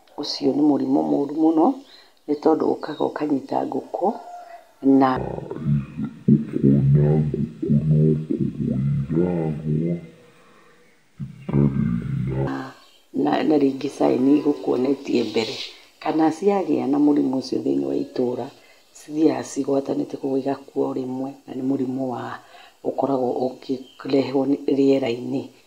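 Stereo read as mono runs from 5.16 to 12.47 s. Here the left and right samples of a stereo stream are taken one after another as if they were a single channel, so each stereo frame becomes two mono samples. The speech plays at half speed and drops a full octave, 12 semitones, turning slow and deep, while a fainter mirrored copy of the sound shows up in the upper half of the spectrum.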